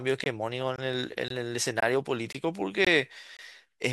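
A gap between chunks cuts the speech every half second with hard-edged silences of about 21 ms, at 0.24–0.26, 0.76–0.78, 1.28–1.30, 1.80–1.82, 2.32–2.35, 2.85–2.87 and 3.37–3.39 s, where silence is left between 0.5 s blocks.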